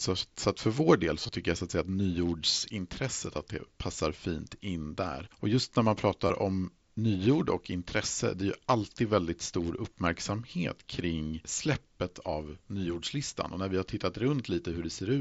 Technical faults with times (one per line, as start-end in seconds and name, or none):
1.23-1.29 concealed Bluetooth headset packet loss
6.27-6.30 concealed Bluetooth headset packet loss